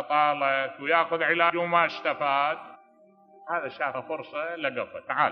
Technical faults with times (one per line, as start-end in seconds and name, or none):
1.49 compressed frames skipped
2.74 compressed frames skipped
3.93 compressed frames skipped